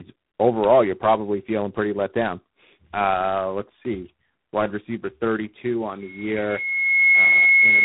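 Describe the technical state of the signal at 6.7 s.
At 6.7 s the signal carries a loudspeaker feedback squeal that begins at 6.01 s and runs to the end of the clip at 7.85 s. The microphone is picking up the loudspeaker it feeds, and at 2.2 kHz the loop gain exceeds one, so that frequency reinforces itself on every pass. The tone swells over roughly a second. By 6.7 s it is still swelling toward about 10 dB above the speech.

Underneath the squeal, the speech shows tandem speech coding. It has passed through two speech codecs in a row, with a G.726 stage last, and each coder has re-quantised the previous one's already degraded output. The result is rougher, more muffled and more warbly than a single codec would leave it. The band stops at about 3.9 kHz, which fits a narrowband telephone path. The squeal at 2.2 kHz lies well inside that band.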